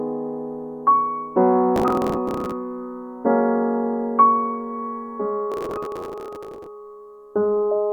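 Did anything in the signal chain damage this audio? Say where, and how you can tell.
Yes, processor overload crackle in the driver buffer at 1.76–2.52 s and 5.52–6.66 s: missed deadlines on roughly 10 ms buffers replay stale audio as tearing.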